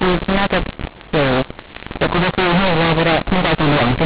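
Speech heard through a G.711 telephone path shows the mu-law and A-law mixed up for the whole clip: audio coded as A-law is decoded as mu-law, so each 8-bit value maps to the wrong level. Louder sounds come out harsh and gritty, and pauses fill with a hiss where silence should be. Unlike clipping, the distortion isn't confined to peaks, and unlike normal G.711 quantisation noise it lifts the quietest moments well above silence.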